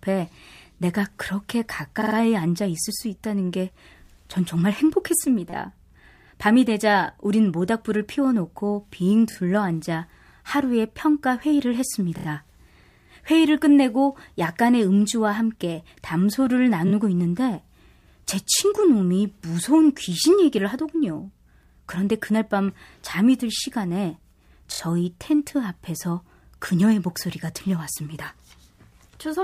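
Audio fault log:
2.00–2.14 s, 5.50–5.53 s, 9.30–9.35 s, 12.17–12.25 s, 16.87–16.91 s, 24.72–24.79 s: repeated frames. A short block of coded speech plays again and again (a 36, 5.8, 13, 16, 23 and 13 ms block heard 3, 5, 2, 3, 2 and 3 extra times), giving a rapid stutter. Each run stretches the speech by 29 to 139 ms.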